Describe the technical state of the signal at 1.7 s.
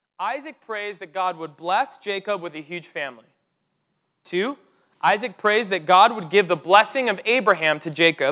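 At 1.7 s the level is mid-way through an automatic gain rising. The control judged the input too quiet and raised its gain step by step from 0.18 s to 3.01 s, by about 8 dB. Speech and background noise swell together. The narrowband call path, with nothing above 4 kHz, fits G.711 mu-law coding.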